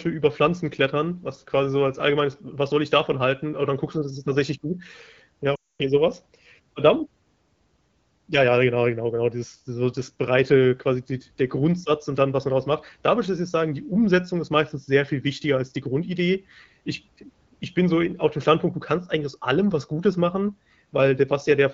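From 5.55 to 5.81 s, a burst of lost AMR speech frames failed their checksums, which fits twelve 20 ms frames. The wideband decoder stretched its last good pitch and vocal tract settings with falling gain, so the speech quickly drops to near silence, and returns weak and rough on "so was".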